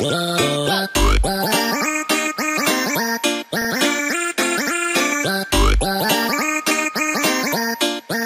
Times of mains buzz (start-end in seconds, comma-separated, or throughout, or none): none